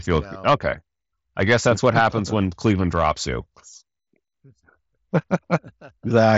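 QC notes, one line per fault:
Nothing stood out on listening to this speech.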